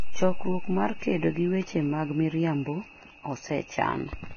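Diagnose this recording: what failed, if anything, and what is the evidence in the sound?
The codec stage is where this went wrong, and it's most likely Vorbis compression pushed hard. Across the whole clip nothing gets through above 6.5 kHz, so the speech sounds dull, yet the remaining treble is hissy and grainy, with smeared consonant onsets. That's the encoder dropping its cut-off and quantising the upper bands so coarsely that the detail turns into noise. The damage is heavy, which fits a very low bitrate, somewhere under 20 kbps.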